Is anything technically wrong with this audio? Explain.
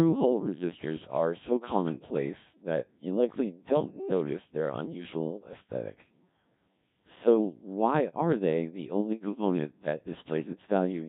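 Yes. The speech is passed through the Codec 2 vocoder for its whole length. Heavy robotic buzz points to a rate near 1.3 kbit/s. Because the voice is resynthesised from pitch and envelope, not smeared like ordinary codec artefacts, it sounds buzzy and mechanical.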